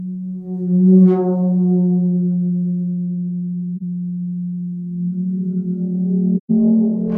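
AAC frame loss with muting at 3.76 s and 6.37 s: dropped frames decoded as silence, leaving soft-faded gaps in the music, about 43 ms (roughly one frame) and then 128 ms.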